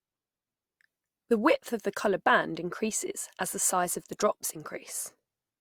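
No technical faults can be heard anywhere in it.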